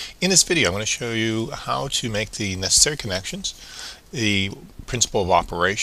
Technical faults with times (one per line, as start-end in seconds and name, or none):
none